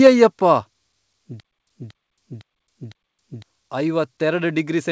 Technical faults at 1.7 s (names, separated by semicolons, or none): stutter with silent gaps